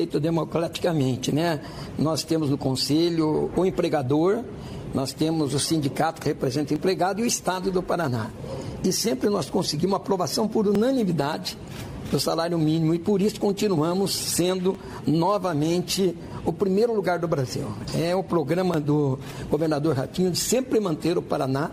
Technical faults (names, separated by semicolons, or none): audio missing between chunks